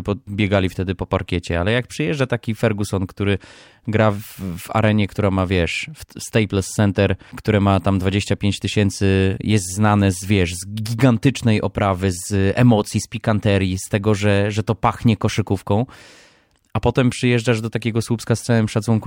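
No technical faults occur at any point in this recording.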